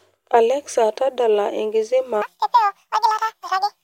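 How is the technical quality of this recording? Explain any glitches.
The recording has one clear glitch: a section at the wrong speed near the end. From 2.22 s to the end of the clip at 3.84 s, the speech runs at 1.89 times its proper rate. It was likely resampled or played against the wrong clock for that stretch. Speed and pitch rise together. The voice jumps up by nearly ten semitones. It sounds suddenly thin, chipmunk-like and rushed, and syllables crowd into each other.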